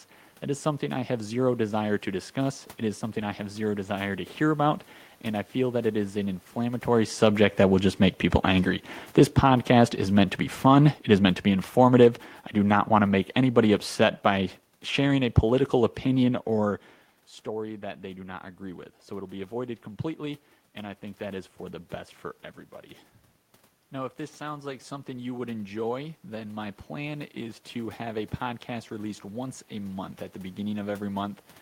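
From 4.41 s to 16.43 s the automatic gain falling fault appears: the gain control judged the input too loud or its background noise too strong and lowered it by about 11 dB across twelve seconds. Speech and room noise sink together, and the waveform envelope and spectrogram noise floor slope steadily downward, separate from the talker's movement around 6.5 s.

Between 24.42 s and 29.62 s comes automatic gain rising: the control judged the input too quiet and raised it by about 4 dB over roughly five seconds. The speech and background swell in step, so the waveform envelope and spectrogram noise floor lift gradually.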